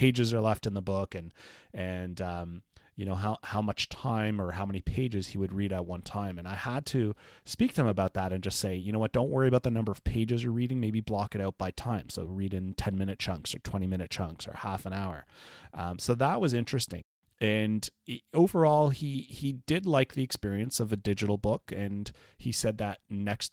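No technical faults can be heard anywhere in the recording.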